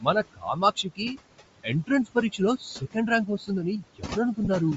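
Throughout the speech, noise suppressor artifacts pull the room noise, which sits about 12 dB below the speech, down by about 20 dB between words. It rises again under them, seen on a spectrogram as flickering, patchy background. The upper spectrum also sounds breathy and grainy, likely from Bluetooth LC3 compression at a low bitrate, around 32 kbps with 10 ms frames. A spectrogram would show blocky, noise-filled high bands.

From 0.23 to 1.18 s, speech cut by the noise suppressor swallows soft sounds for a total of under half a second, dropping up to about 18 dB. These show as sudden dips in the waveform envelope.

At 1.46 s, lost LE Audio frames leave a brief noisy smear where the decoder repeats the previous spectrum with scrambled phase. It shows as a thin smeared column on the spectrogram, consistent with one lost 10 ms frame.

Further speech cuts follow at 2.57 to 2.96 s (down about 15 dB), 3.26 to 3.49 s (about 13 dB) and 3.81 to 4.17 s (about 18 dB). 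Each leaves faint, clipped-off portions, about 150 to 200 ms in total per stretch.

From 4.45 to 4.48 s, a second frame loss of about 20 ms gives a slightly longer smear, which fits two missing frames.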